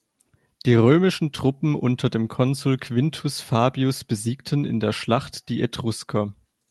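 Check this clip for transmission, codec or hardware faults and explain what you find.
No transmission, codec or hardware faults are audible here.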